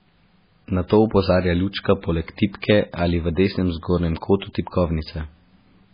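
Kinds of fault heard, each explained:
MP3 compression: the speech has nothing above 5 kHz and a heavily watery, swirling texture, likely from a very low-bitrate encode near 16 kbps.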